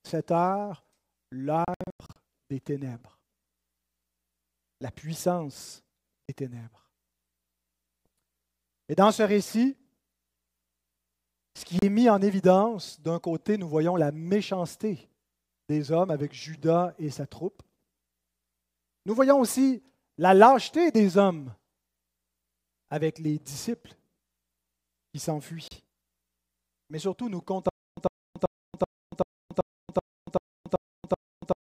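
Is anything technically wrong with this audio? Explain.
Yes, there are two faults. The first is digital broadcast dropout. The receiver stopped getting decodable frames, either because the signal was lost or because frames failed their checksum, so it muted until valid data returned. Between 1.65 and 2.16 s, several short holes totalling about 288 ms are scattered over roughly half a second, and the longest lasts 96 ms. The hole sizes fit 32 ms frames being discarded. Single 32 ms cuts follow "la puissance" at 6.26 s, precede "est mis en évidence" at 11.79 s, and occur again at 25.68 s. Each cut silences the speech, and the missing audio never comes back.

The second is stutter with silent gaps, from 27.69 s to the end. The likely cause is a stalled stream or player that replayed its last buffered fragment on each retry and then had nothing more to play. Right after "surtout nous", a 102 ms scrap of speech repeats ten times at a steady 383 ms interval, with 281 ms of digital silence between repeats, and the speech never resumes.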